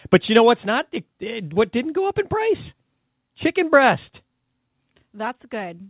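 Short concealed packet loss at 1.54 to 1.58 s, before "didn't go up in": 20 ms arrived too late, and the decoder stretched the preceding sound over the gap, leaving a brief smear.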